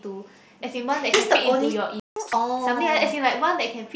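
At 2.00 s the speech cuts out into silence. This is a playback stall. The gap lasts about 0.17 s, ending at 2.16 s. The player most likely ran short of buffered data, or its thread was held up, so nothing reached the output. The sound simply stops in mid-flow.

From 2.16 s to 2.33 s comes catch-up at higher speed. The player works through its backlog at double speed by resampling. That halves the duration and lifts the pitch by about 10 semitones. The speech sounds hurried and squeaky for about 0.17 s. That matches the length of the gap, so the lost time is recovered. Then speed and pitch drop back to normal. The band stays capped at 8 kHz throughout, with light grain from the mSBC headset link.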